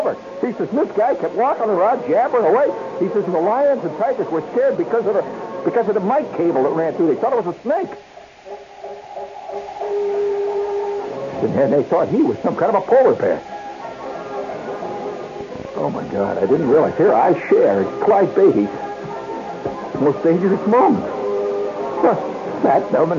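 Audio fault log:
15.41–16.92 s: train of clicks. For about one and a half seconds, a burst of roughly twenty sharp ticks sits on top of the sound. They arrive at about 12.7 per second, but the spacing is uneven rather than metronomic. Each click has much the same shape and peaks at about the level of the audio itself. The likely cause is interference from nearby equipment or a faulty connection or power supply.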